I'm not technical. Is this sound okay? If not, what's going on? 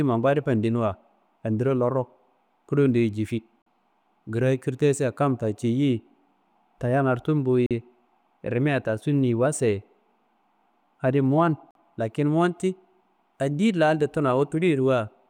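No. The speech drops out briefly at 3.62, 7.66 and 11.71 seconds, after "kulondeye jifi", "tayangaro tumbo" and "adi mowan", in sharp silent blips of about 44 ms each. This is a gap between chunks: the audio arrives in 4-second pieces, and silence is inserted at each join.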